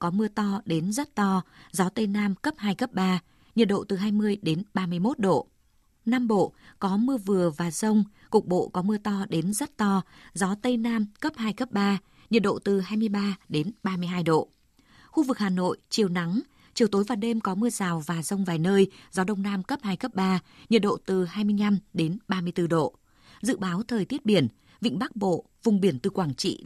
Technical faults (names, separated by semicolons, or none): none